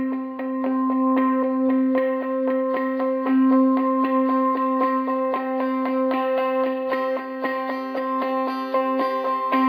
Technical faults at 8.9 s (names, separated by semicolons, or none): imaging from linear upsampling